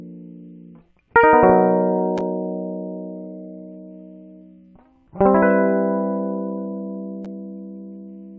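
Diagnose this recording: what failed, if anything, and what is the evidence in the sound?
Nothing failed at any stage of the chain: the music carries no audible dropouts, clicks, distortion, level jumps or timing disturbances anywhere in the recording.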